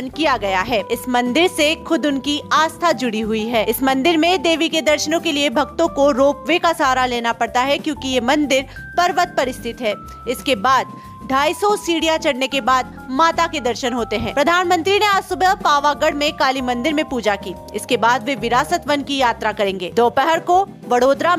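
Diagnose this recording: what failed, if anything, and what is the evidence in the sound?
Listening closely across the whole recording, nothing stood out that points to a failure at any stage of the chain.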